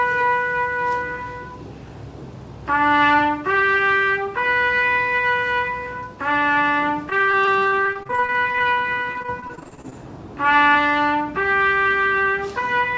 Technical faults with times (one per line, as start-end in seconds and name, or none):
7.10-9.93 repeated packet loss (robotic sound)